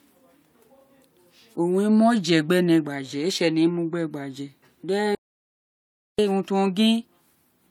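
At 5.15 s the speech cuts off abruptly, and the signal drops to silence until 6.18 s, when it resumes mid-flow. This is an audio dropout to silence: the gap holds no room tone or noise floor at all. The likely cause is a brief loss of the input, such as a disconnected device, a broken link or an accidental mute, while recording continued. About 1.1 s of speech is missing.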